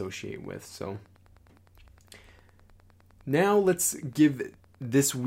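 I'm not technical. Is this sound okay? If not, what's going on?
No. A faint, steady ticking, about ten times a second, runs under the speech throughout. This is Wi-Fi interference: a nearby Wi-Fi radio's regular signal leaks into the audio circuit.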